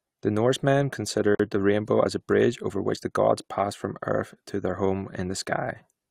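At 1.35 s the speech drops out for about 47 ms, a gap at a join of encoded pieces, resuming at 1.40 s where it left off: untrimmed encoder delay and end padding between separately encoded pieces. The waveform shows a flat dropout with smeared edges, and the spectrogram a thin vertical blank band.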